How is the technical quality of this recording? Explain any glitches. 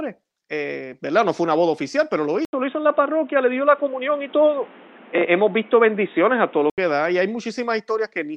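One fault affects quality. From 2.45 to 6.78 s, after "boda oficial pero lo" until "da y hay", the input likely switched to a poorer device. After an 80 ms silence, the sound is capped at 3.8 kHz, shifts level by several dB, and carries new background noise well below the signal.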